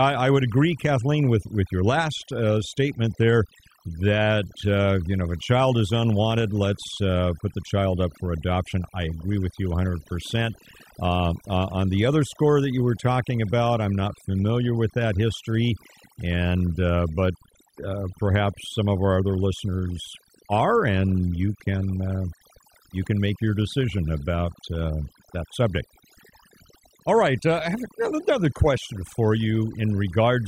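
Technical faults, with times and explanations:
Throughout, overdone noise removal: the noise reduction was pushed so hard that any frequency band close to its noise estimate is cut nearly to nothing, taking soft parts of the speech too. Unlike a plain gate, the background becomes near silence dotted with twinkling specks.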